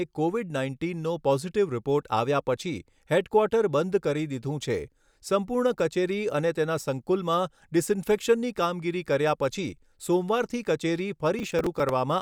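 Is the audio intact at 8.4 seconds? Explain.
Yes, the audio is intact at 8.4 seconds, with no audible fault at that moment.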